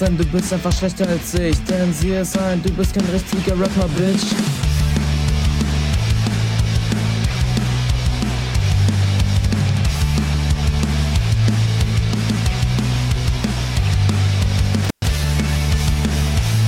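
Intermittent contact cuts the audio between 14.84 and 15.06 s, with a gap of about 118 ms; crackle at the edges marks a loose cable or plug, not a clean digital dropout.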